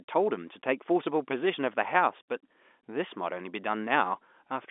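No technical faults can be heard anywhere in this speech.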